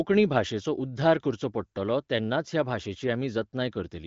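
Speech over an AMR wideband (HD Voice) path, its lightly coded character consistent with one of the upper rates near 16 kbit/s, with no technical fault to report.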